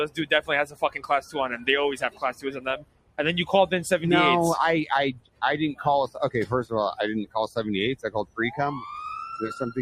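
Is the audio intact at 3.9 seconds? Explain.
No. A noise suppressor applied to music or sounds runs throughout. It mistakes sustained tones and tails for noise, dipping them roughly 15 dB, so the sound pumps and thins.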